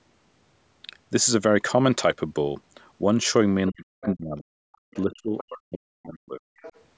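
From 3.7 to 4.52 s, the echo canceller likely could not separate the talker from loudspeaker echo during double talk. That is speech suppressed in double talk: the voice dips or cuts out for about 0.7 s in total, falling by up to about 40 dB. Inside that stretch, at 4.03 to 4.12 s, the other side's voice leaks through. The canceller likely failed to remove it fully, leaving a scrap about 20 dB below the speech. A fainter trace, about 40 dB down, follows at 4.73 to 4.78 s. From 4.82 to 6.42 s, the same double-talk suppression returns for about 1.5 s in total, again dropping the voice by up to about 40 dB. During it, the leaking far-end voice surfaces at 4.94 to 5.15 s at about 25 dB below the speech, and at 5.38 to 5.44 s at about 15 dB below. One last leaked fragment comes at 6.58 to 6.8 s, about 20 dB under the speech.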